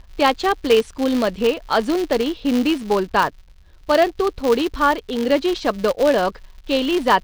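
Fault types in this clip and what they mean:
Filter restarted on every block: A filter in the chain discards its internal state at each block boundary and starts again from zero, so every block opens with a small transient. Here that produces a continuous buzz at 188 Hz under the speech, which fits a 256-sample block at a 48 kHz rate. The buzz rises and falls with the level of the speech and runs through the whole clip.
Word clock ticks: The receiving end of a digital link runs on its own clock rather than locking to the sender, so the two slowly drift apart and a sample gets dropped or repeated each time they slip past one another. In this clip about five sharp ticks of uneven strength fall roughly every 1.5 s between 0.78 s and 6.33 s. Each one is a single-sample slip, consistent with a clock mismatch of around 15 ppm.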